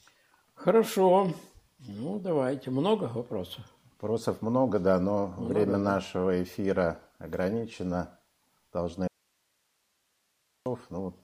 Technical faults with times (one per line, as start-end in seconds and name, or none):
9.07-10.66 audio dropout to a faint residue